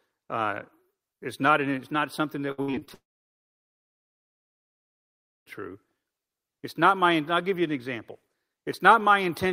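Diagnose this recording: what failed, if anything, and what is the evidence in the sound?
Repeated packet loss (robotic sound), 2.51–2.92 s, right after "an it's not something": six network gaps, longest 65 ms, patched by repeating prior sound, leaving choppy speech with pieces missing.

Long network dropout, 2.94–5.48 s: the sound briefly extends then falls to near silence for about 2.5 s, likely lost packets that were never delivered.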